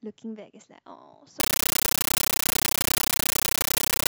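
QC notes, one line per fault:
1.4–4.08 s, compressed stream played as audio: speech becomes loud chattering static to the end. An undecoded AC-3 bitstream is read as samples, with density fitting 640 kbps. The waveform shows 13.3 ms noise blocks 31.25 times a second, separated by silence, and the spectrogram shows broadband vertical stripes.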